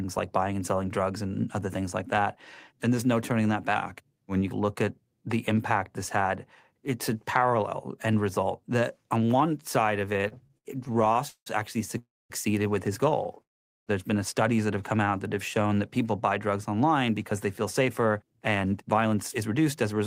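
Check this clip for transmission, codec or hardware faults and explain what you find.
There are several, all on the playback and network side, and they cluster in the second half of this speech clip apart from one early pitch dip.

From 3.75 to 4.41 s there's a drift correction step. Everything drops about 5.5% in speed and roughly 98 cents in pitch, so very close to a full semitone flat, then snaps back to normal. The likely cause is clock-matching software that nudged its playback rate in one jump to rebalance its buffer, so speed and pitch moved together instead of being corrected separately.

Right after "on one side of", from 10.13 to 11.48 s, you get repeated stalls (stutter). The jitter buffer ran dry 17 times in that stretch, and each time the receiver stretched the last bit of sound to cover the wait. That adds up to 446 ms of filler, about a third of the span, with the longest hold at 184 ms. 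Nothing is actually lost; it just drags and judders forward.

There are two call audio freezes. The first runs from 11.98 to 12.32 s, just before "with his": 318 ms of held-over sound that fades, about 240 ms of it silent. The second, 13.43 to 13.89 s, is 442 ms long and almost entirely silence. In both, packets were likely held up in transit, the buffer emptied, and playback resumed where it stopped, so a gap has been inserted and delay has grown by that amount.

From 14.97 to 15.80 s there's a jitter buffer slow-down. Playback runs at about 91% speed with the pitch unchanged, because the receiver repeated single pitch periods and slivers of pause to rebuild its reserve. That adds 86 ms, and sounds come out drawn-out and slightly sluggish, with maybe a faint warble.

Finally, after "people buy drugs online", from 17.31 s to the end, there's a jitter buffer speed-up. The buffer was holding more than its target, so the receiver trimmed out tiny pitch-period slices over and over, around a fifth of a second in total. 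The result is about 107% speed at the same pitch, and the delivery sounds a bit rushed.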